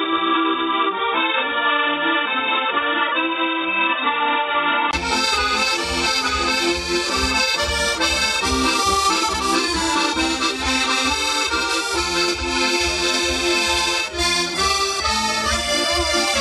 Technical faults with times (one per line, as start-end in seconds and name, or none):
0.00-4.93 input switched to a poorer device